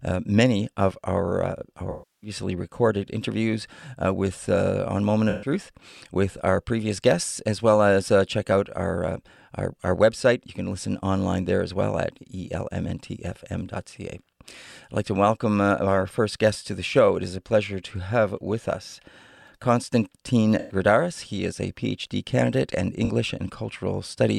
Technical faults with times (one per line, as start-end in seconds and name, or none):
1.90-2.30 AAC frame loss with concealment
5.30-5.50 AAC frame loss with concealment
20.59-20.75 AAC frame loss with concealment
23.04-23.10 AAC frame loss with concealment